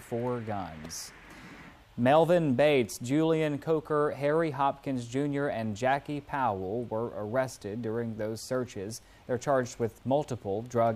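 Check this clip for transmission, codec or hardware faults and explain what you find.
Nothing wrong can be heard anywhere in this clip.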